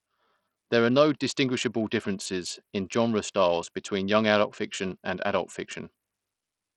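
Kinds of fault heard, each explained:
Bluetooth SBC compression: throughout, the speech's treble flickers and drops out under gritty, aliased noise, likely an SBC link near 64 kbps leaving upper sub-bands without bits.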